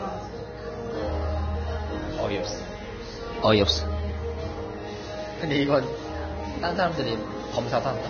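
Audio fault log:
throughout Vorbis compression: likely a Vorbis encode at a very low bitrate, which fits about 18 kbps, so the encoder discards everything above 6.5 kHz and coarsely quantises the remaining upper band, turning fine detail into grainy hiss with roughened tones and smeared attacks.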